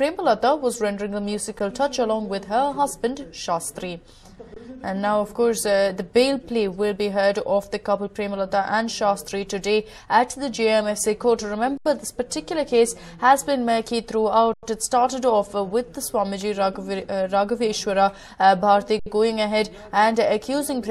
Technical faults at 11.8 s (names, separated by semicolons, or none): underrun with held sample